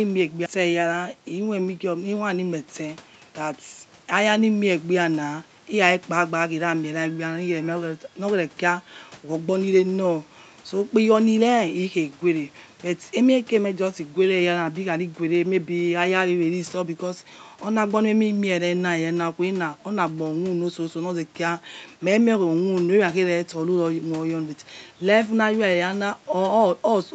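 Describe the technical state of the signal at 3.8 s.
At 3.8 s the speech is intact, with no dropout, distortion or other fault, only the band limit near 8 kHz left by the call path's Opus coding.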